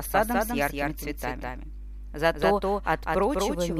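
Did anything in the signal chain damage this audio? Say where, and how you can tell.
Yes. A doubled audio track runs through the whole clip: every sound is followed by a full-band copy roughly 200 ms later, sitting about 5 dB below the original. The copy has no decay tail or room colouring, so it reads as a duplicate of the signal, not an acoustic echo. The likely stage is capture or routing, with the same source recorded a second time through a slower path, or an edit leaving two misaligned copies mixed together.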